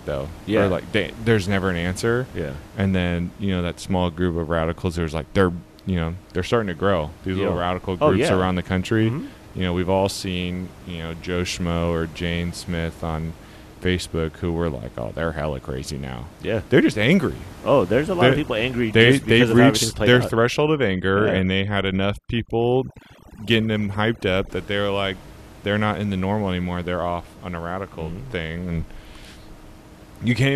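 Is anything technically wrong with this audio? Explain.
Yes: from 18.25 to 24.49 s there's overdone noise removal, bands near the noise floor get gated out, so the background drops into twinkly near-silence, against room noise sitting about 21 dB under the speech.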